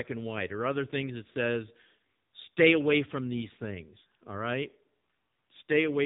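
Speech squeezed through the AMR narrowband mobile codec the whole way: nothing above 3.8 kHz, and heavy buzzy, synthetic damage that fits a low 6.7 kbps mode.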